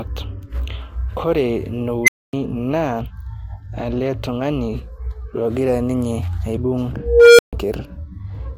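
At 2.04 s and again at 6.96 s an unstable filter runs away. A tone near 2 kHz swells in 40 ms and a lower one near 500 Hz in 0.42 s, both clipping, then cutting to about 0.25 s and 0.14 s of silence. That dead drop after overflow separates it from acoustic feedback.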